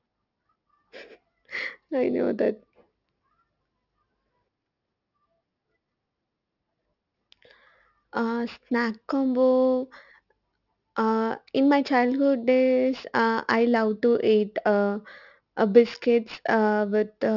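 Aliasing runs throughout the speech. Energy above 6 kHz folds back as gritty, metallic hash roughly 25 dB down, pointing to an unfiltered drop to 12 kHz.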